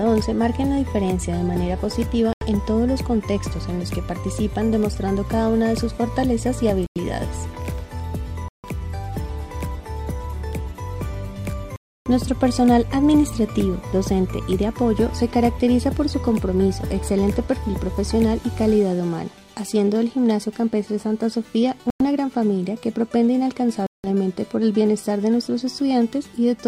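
Six short dropouts to silence break up this audio, at 2.33, 6.86, 8.48, 11.76, 21.90 and 23.87 s. The gaps run from about 82 ms up to nearly 300 ms, the longest around 11.8 s. That pattern points to a Bluetooth stall, likely from interference holding up packets so the headphones' buffer runs empty and playback just waits for the resends.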